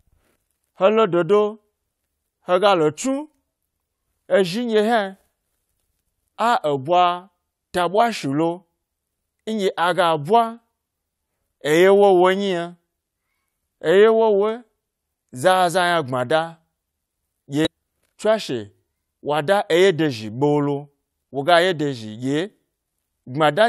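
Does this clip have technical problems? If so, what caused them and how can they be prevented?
Yes. Damaged data in a compressed stream appears twice in this speech: a brief disturbance from 17.65 to 17.67 s and another at 22.88 s. Corrupted bytes made the decoder misread the frames there, lose sync and pick up again at the next valid frame header. A plain dropout leaves silence and a digital click is a bare spike, but these come from the decoder losing its place in the stream. Transferring and storing the file with checksums and error detection would prevent this.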